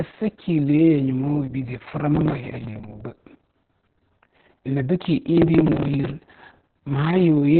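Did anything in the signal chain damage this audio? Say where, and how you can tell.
Yes. At the codec stage, Opus voice compression runs throughout: nothing above 4.4 kHz, a muffled, hoarse, slightly robotic narrowband sound that fits SILK at around 6 kbps.

At the driver or buffer stage, there's processor overload crackle from 5.38 to 6.35 s. It's a gritty tear made of dozens of tiny skipped buffers, each a millisecond or two long, missed while the CPU fell behind.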